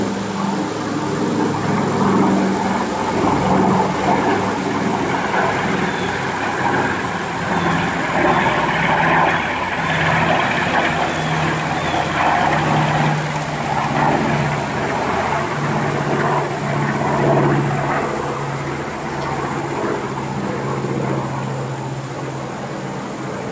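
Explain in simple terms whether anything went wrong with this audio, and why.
Nothing went wrong with this audio; it came through an ordinary call connection that behaved as expected.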